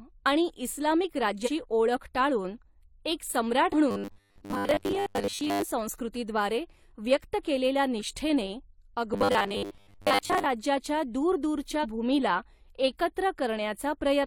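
At 1.43 to 1.49 s, between "आणि इस्लामिक" and "ओळख टाळून एक", compressed frames are skipped. About four 42.7 ms frames are dropped, so roughly 150 ms of audio vanishes and the speech jumps ahead. A second skip at 3.69 to 3.74 s, right after "ओळख टाळून एक", drops about three frames in the same way.

From 3.91 to 5.62 s the speech turns into a rigid metallic buzz at 100 Hz. This robotic sound likely comes from repeated short buffers. A 10 ms slice is replayed over and over, covering most of the passage, while the real audio is lost. The same 100 Hz buzz returns from 9.14 to 10.47 s.

At 11.80 to 11.85 s, about one frame is skipped, removing roughly 40 ms.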